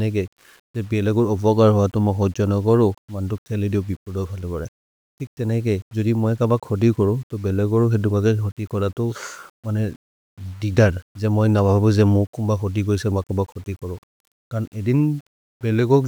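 The speech was most likely reduced to a very coarse word length, consistent with about 8 bits, and rounded to the nearest step with no dither, producing low bit depth without dither across the whole clip. Because the rounding error tracks the waveform instead of being randomised, it comes out as a gritty, grainy distortion sitting roughly 35 dB below the speech. It roughens quiet passages most, and the softest sounds break up into a sputtering, stepped texture or drop out.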